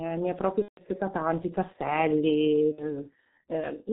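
The whole speech clip has the G.723.1 codec's heavy damage, which fits its 6.3 kbit/s mode. Nothing comes through above 4 kHz, so it sounds muffled and hoarse, with smeared consonants. From 0.62 to 0.82 s there's VoIP packet loss concealed by the speech codec: the decoder stretches its last pitch and filter into a fading buzz or coloured noise for a gap that fits about five 30 ms frames, and it stays weak briefly afterwards. The same thing happens more briefly from 2.72 to 2.84 s, where the gap fits about two frames.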